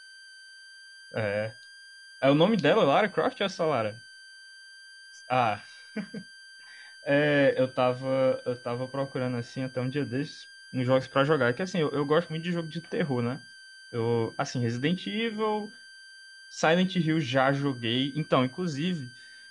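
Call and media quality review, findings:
Switching supply whistle, throughout: power supply running in audible burst mode, putting a thin high tone near 1.5 to 1.6 kHz under the speech, drifting slightly, roughly 25 dB down.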